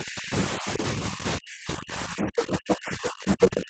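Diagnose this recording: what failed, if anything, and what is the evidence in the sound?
The speech gets pushed down in two stretches: 0 to 0.33 s, dipping about 25 dB, then from 0.49 s to the end, sinking as far as about 40 dB. That's speech suppressed in double talk, likely the call's echo canceller ducking the near talker while the far end was also talking.

The other side's voice is leaking through in three brief bursts at 2.22 s, 2.53 to 2.75 s and 3.42 to 3.49 s. They go from a bit under the speech to level with it, then louder than it. That's residual loudspeaker echo, likely passing an echo canceller that couldn't fully cancel it.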